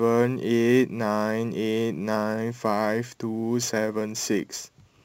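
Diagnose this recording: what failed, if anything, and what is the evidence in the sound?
The converter stage is at fault here: sample clock jitter across the whole clip. There's a grainy hiss riding on the speech, roughest on loud and bright consonants, and gone in the pauses. A clock wobbling by around ten microseconds smears fast slopes, leaving error only about 25 dB down.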